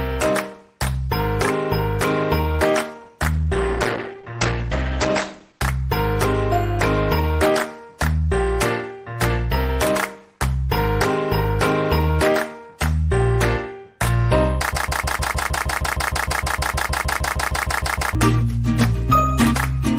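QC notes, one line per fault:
3.34–5.67 s, call bitrate drop: The bandwidth estimate fell and the encoder was forced onto far fewer bits, consistent with a drop from about 32 to 14 kbps, holding its lowest for about 2.3 s. Coarser coding and a top end narrowed from 20 kHz to 8 kHz leave the sound rough and muffled until the rate recovers.
14.73–18.15 s, broken-record loop: Output stalled, likely in the player, encoder or stream, and the last fragment held was sent again and again. A 155 ms piece repeats exactly, back to back, over twenty times for about 3.4 s, and the audio due in that stretch never plays.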